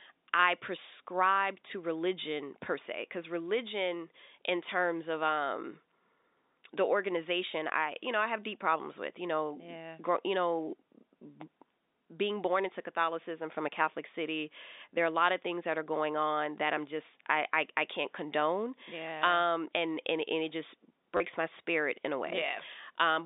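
Packet loss with the last packet repeated occurs at 21.17 to 21.2 s in this telephone speech clip, between "and and it just" and "my spirit in a". About 30 ms of audio went missing, which fits three lost 10 ms packets. The receiver filled the gap by replaying the last good packet until fresh data arrived. Those copies seldom line up with the pitch cycle, and the brief run comes out as a robotic stutter. The G.711 mu-law telephone coding underneath keeps the sound within a line band of roughly 250 Hz to 3.7 kHz.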